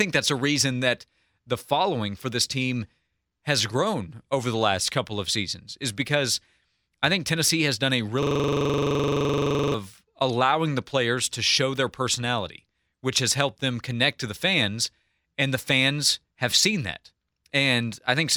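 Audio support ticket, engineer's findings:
System hang loop, 8.23–9.74 s, after "has done a", before "allowing the players to". Host or audio driver froze while the interface kept cycling one ring buffer. A single 42.67 ms slice replays about 35 times, giving a 23.4 Hz buzzing stutter in place of speech. Loop length fits a 2048-sample buffer. Probable component: driver or DMA buffer servicing.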